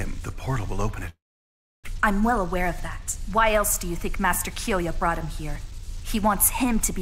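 From 1.09 to 1.90 s there is a long network dropout, likely caused by lost packets. The last sound smears into a fading buzz, then about 0.67 s of near-silence. On a spectrogram, energy collapses to a blank band, and about 0.6 s of audio never returns.

From 1.98 to 5.72 s a jitter buffer speed-up trims repeated pitch-period slices, removing roughly 0.15 s to run 104% fast at unchanged pitch. The waveform shows small splice points, and spectrogram events arrive compressed in time.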